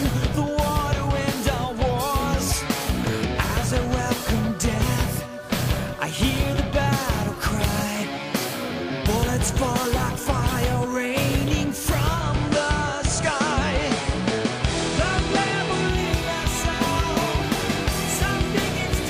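At 12.14 s the digital radio blends to analogue, crossing over to the station's FM broadcast in 127 ms after the receiver lost the digital stream, then returning at 15.99 s. The level holds steady with no change, but a hiss rises, roughly 25 dB below the signal. On a spectrogram a broadband noise floor fills the gaps between those times; the waveform envelope stays the same.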